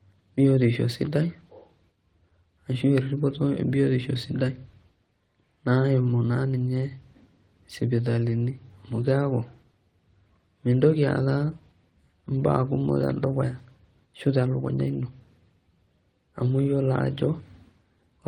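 Nothing in this bit of speech stands out as a technical fault at any point, so there's nothing here to flag.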